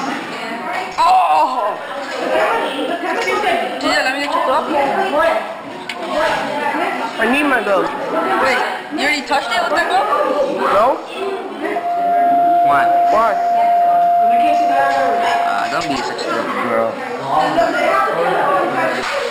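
Imaging from linear upsampling runs throughout the audio. The sound was raised from 12 kHz to 48 kHz by straight-line interpolation, so the top is dulled and a faint mirrored image between 6 and 12 kHz, roughly 30 dB down, adds a metallic shimmer.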